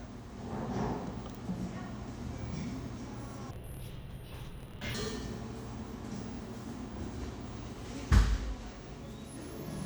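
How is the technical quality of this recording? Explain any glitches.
There is one clear glitch, between 3.51 and 4.95 s: interleaved audio read as planar. Each 26.12 ms block of alternating left and right samples gets split into halves, dropping the sound an octave lower and stretching both halves to play together. Unlike a plain pitch shift, the pace stays unchanged and a choppy, doubled buzz repeats at about 38.3 Hz.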